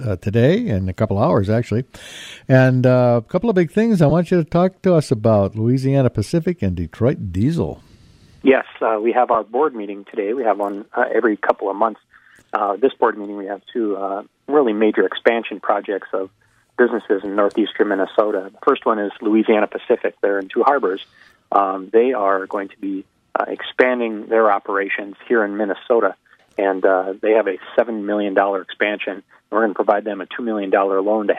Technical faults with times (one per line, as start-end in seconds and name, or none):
2.10 lost LE Audio frames
4.10 lost LE Audio frames
9.34 lost LE Audio frames